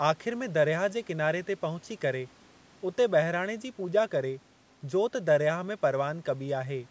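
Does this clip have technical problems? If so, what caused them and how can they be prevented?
No, there are no technical problems in this clip.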